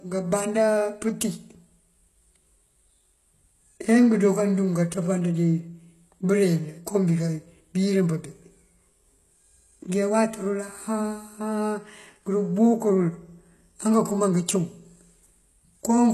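The speech was likely encoded with HE-AAC at a low bitrate, around 16 kbps, so only the lower spectrum is truly coded and the treble is rebuilt from copied bands. Nothing reaches above 12.3 kHz, and the codec damage is plainly audible throughout, with s sounds turning gritty and lispy.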